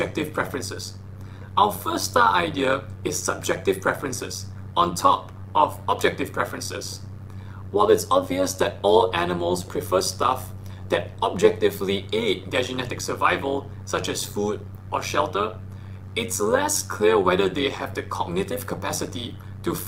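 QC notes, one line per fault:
Throughout: overlap-add ripple. A metallic buzz runs over the whole sound, its level pulsing by about 11 dB roughly 100 times a second. Windowed frames were overlapped without summing to constant gain, so the level swings once per frame.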